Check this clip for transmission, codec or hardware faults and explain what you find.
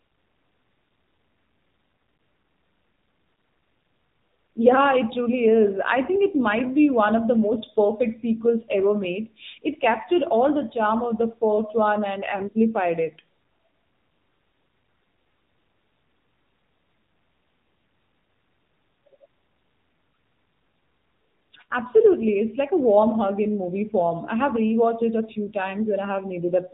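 The clip carries one fault for its whole length: the sound of an AMR narrowband mobile codec, with plainly audible coding damage.

From start to finish the speech is confined to telephone bandwidth, with nothing above 4 kHz. AMR-NB samples at 8 kHz and rebuilds the voice from a vocal-tract filter excited by a sparse set of pulses every few milliseconds. Here the buzzy, synthetic edge on the speech points to one of the lower modes, around 8 kbit/s.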